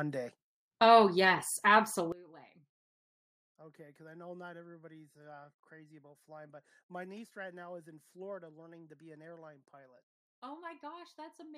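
Speech that collapses from 2.12 s to the end: the level drops by about 21 dB and what's left sounds faint, with the centred voice mostly gone. That's likely one channel inverted, cancelling the shared signal when the stereo is summed to mono.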